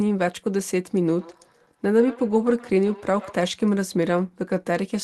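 From 1.09 to 3.53 s, feedback echo between two devices: a second device replays the speech into the microphone, returning it about every 150 ms, peaking about -19 dB below the speech.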